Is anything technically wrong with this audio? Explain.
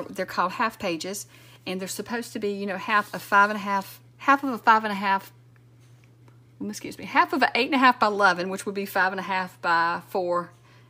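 No, nothing technically wrong can be heard here.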